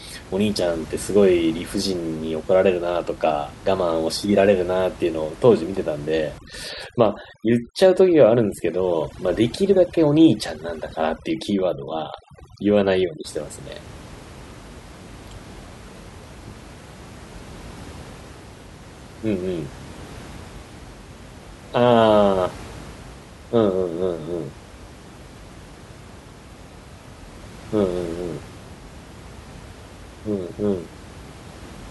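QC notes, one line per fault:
6.38–13.25 s, overdone noise removal: for this stretch the noise reduction is working far too hard on a recording whose room noise sits about 20 dB below the speech. Any frequency band that drifts close to the estimated noise level gets pulled down hard or shut off, so the background drops and breaks up into twinkling specks, and the softer parts of the voice vanish with it. On a spectrogram the noise floor turns patchy and dark, dotted with isolated bright flecks, and the speech harmonics look ragged at their edges. The waveform between phrases drops lower.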